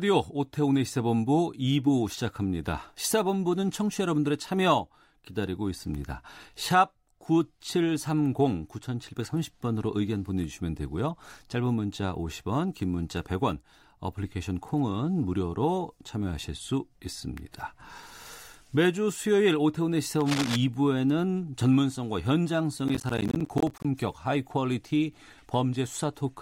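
Cable scratch noise runs from 20.21 to 20.56 s in this speech recording: a dense, uneven burst of scratching and rustling laid over the talking, loud enough to sit only a few decibels below it. The likely cause is a worn cable, connector or control being moved, so its contact resistance jumps about rapidly and injects noise for that third of a second. Processor overload crackle follows from 22.88 to 23.85 s, a gritty tearing riding on the speech. It comes from a few dozen tiny dropouts of silence in quick succession, each around 10 ms long, which fits a processor repeatedly missing the deadline for short audio buffers. Every missed buffer leaves a hard-edged gap, and together they crackle until the load eases.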